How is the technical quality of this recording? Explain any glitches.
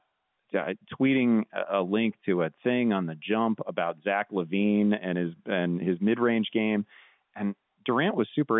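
No glitches can be heard: the speech carries the narrow band of an ordinary fixed-line call, passed through call microphone processing and G.711 telephone coding, with nothing above about 3.8 kHz and no audible disturbance anywhere in the recording.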